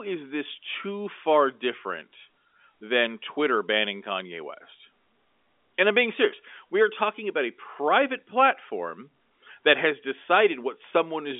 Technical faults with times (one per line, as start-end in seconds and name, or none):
none